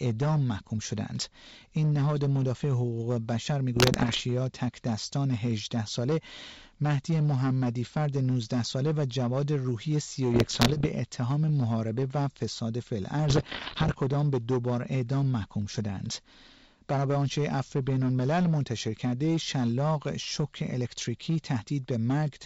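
From start to finish the speech is driven about 8 dB past what one stage could pass, so its peaks are sheared flat. This hard clipping touches a small share of samples, roughly one in fifteen, which places a gritty, harsh edge on every loud syllable. That edge follows the level of the speech and is always present, unlike a transmission fault that comes and goes at particular moments.

Three short bursts of bit errors on an ADPCM link break in at 3.76 to 4.23 s, 10.34 to 10.87 s and 13.28 to 13.97 s. They sound like corruption on the order of a couple of percent of bits. Each flipped bit also throws off the decoder's step size and prediction, so the damage lingers briefly as pops, rough sputtering and small jumps in level. These bursts are heard apart from the clipping because they arrive in clusters at fixed times, whether the speech is loud or soft. The wideband coding underneath, consistent with G.722 at its full rate, keeps clear detail up to about 7 kHz.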